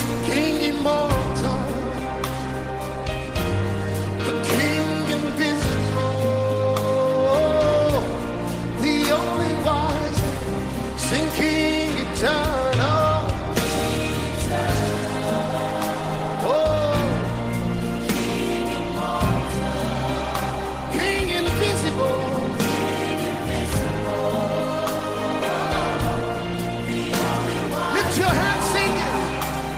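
No technical faults can be heard anywhere in the audio.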